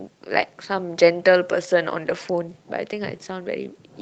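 At 0.41 to 0.43 s, and again at 2.05 to 2.11 s, there is a lost packet rebuilt from error correction. The first stretch fits one missing 20 ms packet, the second two separate ones. Each was replaced by the low-bitrate backup copy carried in the following packet, so the sound never drops out but turns briefly rough and grainy. The waveform stays continuous with no gap, while the spectrogram shows a short, smeared, noisier patch within the Opus call path's 8 kHz band.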